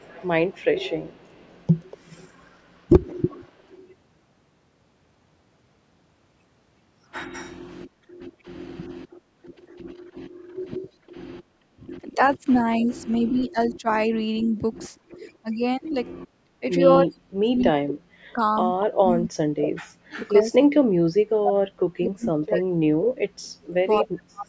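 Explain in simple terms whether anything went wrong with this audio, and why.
Echo leak: a copy of the sound returns about a quarter of a second late at 0.0–3.76 s, 8.33–10.67 s, 12.37–15.9 s, 17.58–20.29 s and 22.05–24.0 s. It grows more noticeable in the later stretches. The likely cause is a speakerphone whose echo canceller let some of its own playback slip back into the call. The fixed delay is what sets it apart from ordinary room reverberation.

Speech suppressed in double talk: from 10.41 s to the end, the main sound repeatedly sinks, sometimes almost to silence, for roughly seven seconds in total. This likely happened because the echo canceller, faced with both sides at once, turned everything down. Unlike echo, something is lost here rather than added.

Background gated by the echo canceller: at 15.06–15.14 s the room sound dips briefly and comes straight back. The canceller clamped the microphone while the loudspeaker played. 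It is much shorter and shallower than the double-talk cuts. The missing treble above 8 kHz is normal call processing, not a fault.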